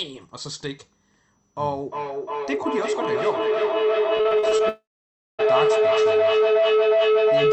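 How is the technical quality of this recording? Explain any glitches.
The recording is poor: a feedback howl runs through most of it, and the network breaks up around the middle.

Feedback howl, from 1.79 s to the end: the audio from one device's loudspeaker is re-entering another device's microphone in the same room and gaining level on each pass. It settles into a tone near 400 Hz, pulsing roughly every 0.4 s and peaking about 7 dB above the speech.

Repeated packet loss (robotic sound), from 4.17 to 4.61 s: audio kept going missing in short bursts, with the longest hole 39 ms. Each hole was patched by stretching the previous sound, so about a third of this stretch is filler, which makes it sound choppy.

Long network dropout, from 4.69 to 5.41 s: the likely cause is that no audio reached the receiver for about 0.7 s. The last sound is continued as a briefly fading buzz, then roughly 0.57 s of silence follows before the audio resumes with that section gone.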